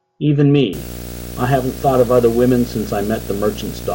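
A speech recording, from 0.73 s to the end, carries a buzz at 59.94 Hz with hash and a 15.7 kHz whine, roughly 15 dB below the speech: video or display buzz coupling in from a screen or video cable.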